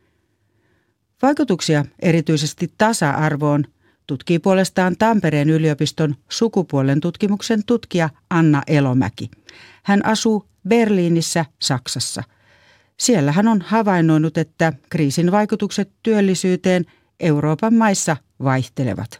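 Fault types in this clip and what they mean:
No technical faults can be heard anywhere in the speech recording, with the signal holding steady and continuous throughout.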